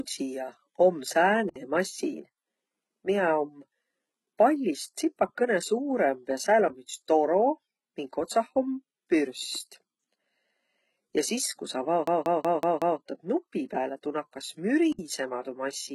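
HE-AAC compression is the likely cause of the heavy codec damage running through this whole speech recording: nothing survives above 11.8 kHz, and the treble that remains is rebuilt from copied lower bands, so sibilants turn gritty or metallic, a pattern that points to a bitrate near 16 kbps. A block of digital silence cuts the audio at 1.49 to 1.56 s (64 ms), again at 6.68 s for about 21 ms just before "om üts", and at 14.92 to 14.99 s (64 ms); each is an abrupt hole, and the 21 ms one fits a 1024-sample buffer. A system hang loop runs from 12.07 to 13.00 s, where one 186 ms slice repeats exactly five times at 5.38 Hz, a machine-gun stutter from the hardware cycling a frozen ring buffer, which fits an 8192-sample buffer.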